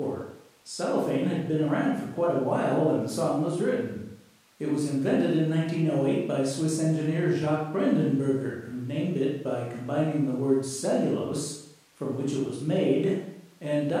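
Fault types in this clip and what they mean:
No faults found in this speech recording; nothing to list.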